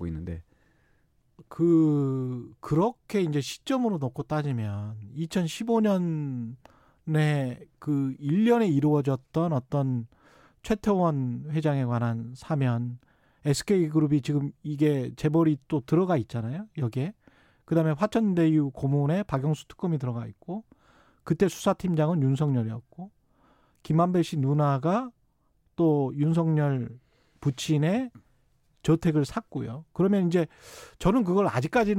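No technical faults can be heard anywhere in this speech recording; the signal holds steady and continuous throughout.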